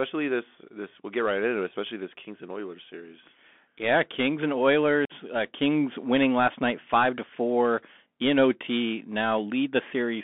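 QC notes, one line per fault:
throughout: Bluetooth CVSD headset codec. The speech sits in a narrow band of about 200 Hz to 3.5 kHz, with nothing higher. A one-bit, step-adapting coder, consistent with a 64 kbps CVSD link, leaves granular hiss underneath. S sounds turn scratchy and loud bright moments distort.
5.05–5.12 s: unconcealed Bluetooth headset packet loss. About 45 ms of speech drops out as several packets go missing. Nothing fills the gap, so the hole has abrupt edges. The speech returns briefly quieter while the codec's step size recovers.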